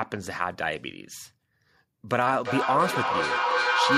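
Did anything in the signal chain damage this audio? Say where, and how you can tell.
Yes, in call processing. From 2.38 s to the end, feedback echo between two devices returns the speech roughly every 300 ms, each device replaying the other's microphone, building to about 1 dB above the speech instead of decaying.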